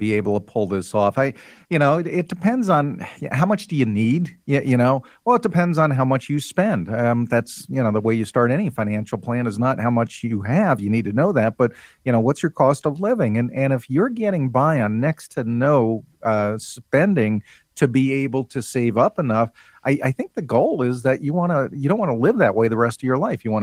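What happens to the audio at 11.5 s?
Nothing goes wrong at 11.5 s: the speech carries on intact through that moment, with the Opus voice compression working normally there.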